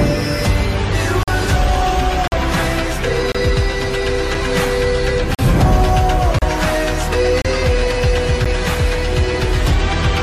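Hard-edged silent holes of 4 to 46 ms break the audio roughly once per second, at 1.23, 2.28, 3.32, 4.35, 5.35, 6.39, 7.42 and 8.45 s: gaps between stream segments, consistent with one-second segments whose timestamps leave silence between them.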